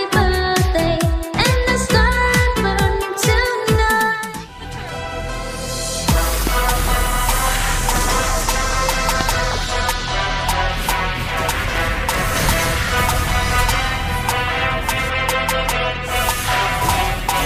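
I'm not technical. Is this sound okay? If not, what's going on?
No. There are two loud pops, one at 6.47 s and another at 9.21 s, each lasting only about two hundredths of a second and standing well above the surrounding sound, which continues underneath without interruption. A loud pop is a sudden electrical jolt added on top of the audio. Here it is likely from a connector being disturbed, a switch, static discharge, or a brief glitch in the audio hardware.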